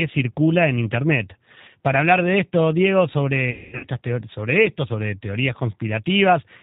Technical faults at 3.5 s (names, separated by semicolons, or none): G.729 codec; VoIP packet loss concealed by the speech codec